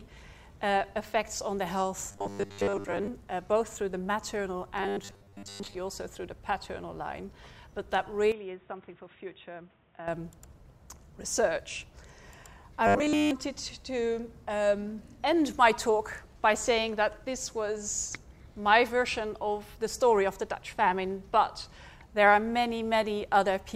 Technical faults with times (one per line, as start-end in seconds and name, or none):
2.11-3.07 robotic sound from repeated short buffers
4.79-5.81 robotic sound from repeated short buffers
8.32-10.08 input switched to a poorer device
12.87-13.31 robotic sound from repeated short buffers